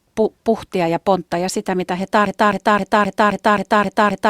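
At 2.26 s the playback chain likely stalled and kept resending its last held fragment, a broken-record loop: a 263 ms piece of the speech repeats exactly, back to back, through to the end of the clip, and whatever should have followed is lost.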